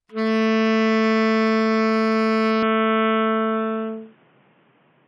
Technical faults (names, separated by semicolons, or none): input switched to a poorer device